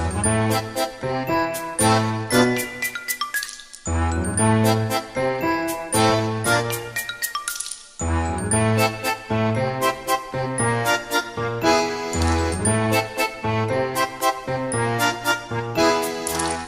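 At 3.43 to 3.48 s a corrupt frame was decoded: damaged bits across a couple of compressed frames were played as if valid, so misread gains placed energy at wrong frequencies. The result is a brief chirp-like burst, peaking near -20 dBFS.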